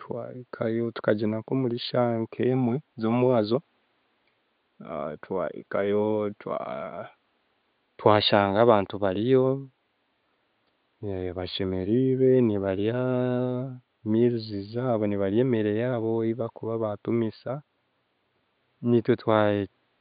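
No technical faults are audible.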